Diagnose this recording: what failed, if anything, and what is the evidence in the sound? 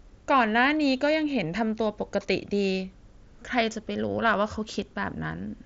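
Nothing stood out on listening to this speech recording, so no stage of the chain shows a failure.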